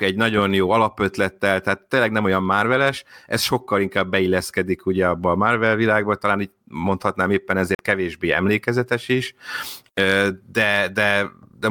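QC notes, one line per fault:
7.75–7.79 s, Bluetooth stall: the speech drops to dead silence for 45 ms, then carries on. Likely radio interference delayed packets, so the headphones' buffer ran empty and playback paused until the resent data arrived.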